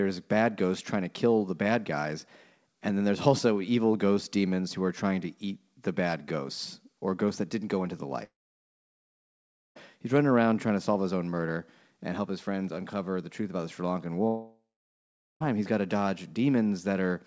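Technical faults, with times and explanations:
8.24–9.77 s, long network dropout: right after "didn't go into the" the sound smears into a brief fading buzz, then about 1.45 s of silence before "he's running around trying". Likely packets stopped arriving, and the lost stretch was never played.
14.27–15.42 s, long network dropout: same thing again, with a longer fading tail and then about 0.79 s of silence before "he's got to", with the missing audio skipped.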